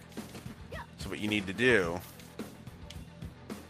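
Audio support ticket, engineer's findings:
No audible faults found on review; no dropouts, clicks, distortion or level problems detected in the capture, nothing to escalate.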